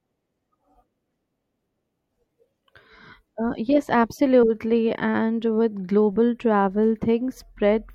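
A corrupt frame decoded at 6.13 to 6.16 s: flipped bits in what sounds like a couple of compressed frames were played anyway, so misread gains and codes put energy at wrong frequencies, heard as a short chirp, squeak or burst of noise in the speech peaking around -25 dBFS.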